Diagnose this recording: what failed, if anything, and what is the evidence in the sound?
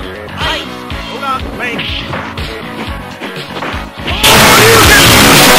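The failure sits at the sample-format conversion stage, most likely 32-bit float data read as 32-bit integer samples. From 4.24 s to the end at 5.59 s, the waveform collapses into a near-square shape at an almost fixed, high level, because the sign and exponent bits now dominate each value. The sound turns abruptly loud and harsh, with background noise lifted to the level of the main material, though its pitch can still be followed.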